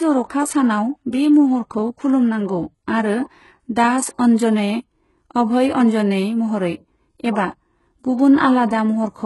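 From start to finish, the speech has gritty, metallic s sounds and a synthetic treble that stops at about 11.5 kHz. This is likely heavy HE-AAC compression, fitting a bitrate near 12 kbps, with the upper band rebuilt from copied lower harmonics.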